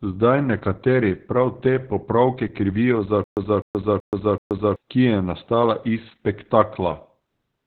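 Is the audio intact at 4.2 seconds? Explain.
No. At 4.2 s the sound sits inside a stutter with silent gaps that runs from 3.24 to 4.76 s. A fragment of about 0.25 s plays, then about 0.13 s of dead digital silence follows. The cycle repeats evenly every 0.38 s, four times in all. This is likely a stalled stream replaying its last buffered fragment on each retry and then running dry. The speech that belonged in that stretch is lost.

The whole clip also carries heavy Opus voice compression, so this moment has it too. The sound points to the SILK coder at a very low rate, around 8 kbps, in 20 ms frames. At that rate the band is cut to narrowband, near 4 kHz. The excitation is coded coarsely. The speech comes out muffled and hoarse, with a slightly robotic edge.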